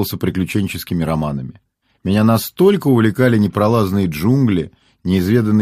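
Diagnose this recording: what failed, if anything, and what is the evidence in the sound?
Nothing failed here that I can hear: no stage in the chain, from the wiring to playback, leaves a mark on the sound.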